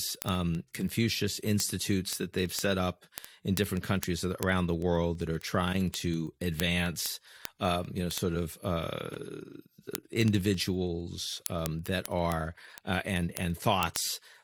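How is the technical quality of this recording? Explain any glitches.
The recording has a clear problem: a steady train of word clock ticks runs through almost the whole speech clip. From 0.15 s to 14.42 s there are around two hundred sharp ticks of uneven strength, roughly every 70 ms. The receiving device isn't locked to the sender's clock, and they drift apart by a few hundred ppm. Each time they slip, a single sample is dropped or repeated, which you hear as a tick.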